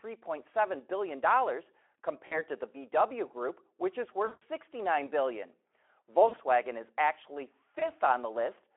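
VoIP packet loss concealed by the speech codec: the Speex decoder, running at narrowband with light coding damage otherwise, lost packets and extrapolated from its last pitch and filter with falling gain. The speech smears into a fading buzzy tone or coloured noise at 2.27–2.43 s (40 ms lost), after "which is" at 4.25–4.43 s (160 ms), at 6.27–6.39 s just before "is actually", and after "is actually" at 7.79–7.92 s (20 ms), each recovering weakly.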